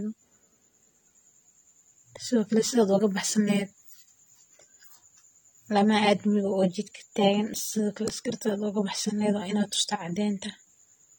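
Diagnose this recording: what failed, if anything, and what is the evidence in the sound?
Codec stage: throughout, the speech sounds dull and warbly, likely AAC compression at a low bitrate near 32 kbps. The spectrogram shows a lowered top cut-off and patchy high bands.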